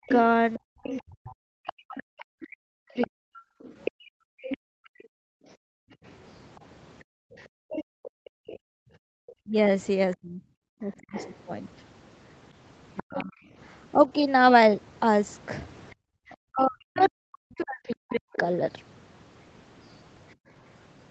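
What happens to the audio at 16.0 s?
The room sound drops out from 15.95 to 16.04 s. This is background gated by the echo canceller. It clamped the microphone hard while the loudspeaker played, so the background falls by about 37 dB. It returns about 90 ms later when the canceller lets go.

The same moment sits inside a stretch of speech suppressed in double talk, from 9.43 to 18.25 s. The talker's voice dips very deeply and cuts out in pieces, about three seconds in all. The likely cause is both sides talking at once. The canceller could not separate them and turned both down.

Underneath, the other side's voice is leaking through, from 0.07 to 20.33 s. It sits roughly 15 dB below the talker. It is likely residual loudspeaker echo that the canceller failed to remove from the microphone.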